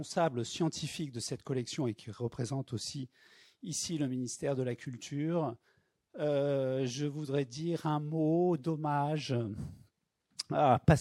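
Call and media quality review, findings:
Nothing stood out on listening, and no findings to log for this recording.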